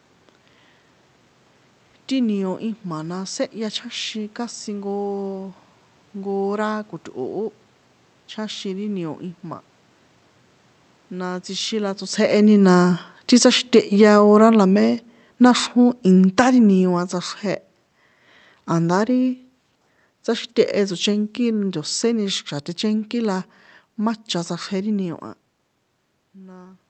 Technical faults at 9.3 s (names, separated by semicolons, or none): none